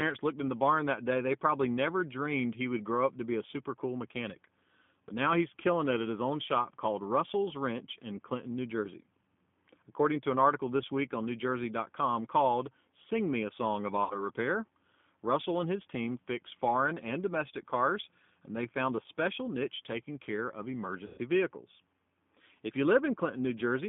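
Throughout, the speech passes through the G.729 codec at 8 kbit/s, rebuilt from a filter model and a few pulses per frame. It sounds rough and slightly synthetic. A spectrogram shows energy confined to roughly 150 Hz to 3.5 kHz, empty above.

From 14.04 to 14.27 s, VoIP packet loss concealed by the speech codec fills about 60 ms of missing audio. The decoder repeats its last pitch and filter, so the sound smears into a fading buzzy tone or coloured noise. The waveform shows a decaying stretch.

From 21.06 to 21.19 s, just after "niche taking care of", a longer gap of about 120 ms is concealed the same way. The extrapolation decays further and the voice stays weak or distorted as decoding recovers. A spectrogram shows the stretched sound fading out.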